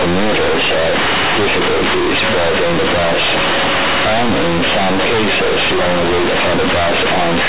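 Throughout the clip, A-law telephone bytes are played as linear 8-bit samples with no expansion. This is companded audio read as linear. Every sign change jumps across half the range, so quiet speech matches loud speech as harsh, buzzy distortion, and pauses fill with heavy noise.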